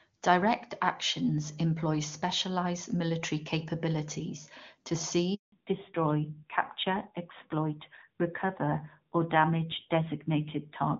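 A phone call recording of speech, hit by a handover gap at 5.34 s, right after "specialized military capabilities to". The call was switched between networks and no speech frames arrived for about 180 ms, so the voice collapses to silence until 5.52 s and that stretch of speech is lost. Immediately afterwards comes a fallback to narrowband: the new link dropped the call from HD Voice to an older narrowband codec, and from 5.52 s to the end nothing above 4 kHz remains. The voice turns duller and rougher, which fits AMR-NB at a rate near 7.4 kbit/s, in contrast to the crisp wideband sound of the first half, consistent with AMR-WB at a high rate.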